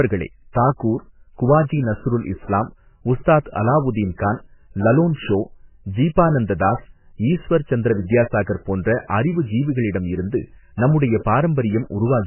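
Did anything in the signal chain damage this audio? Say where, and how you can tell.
Yes, at the codec stage, throughout the speech: nothing is present above 3 kHz, and the sound is heavily watery and swirly, with smeared attacks. This is likely MP3 compression at a very low bitrate, cutting the treble and toggling weak spectral lines frame to frame.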